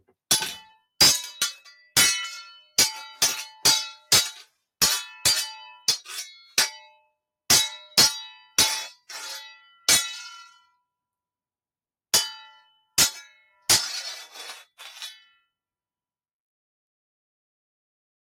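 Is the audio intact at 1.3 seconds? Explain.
Yes, the audio is intact at 1.3 seconds, with no fault to be heard at that moment.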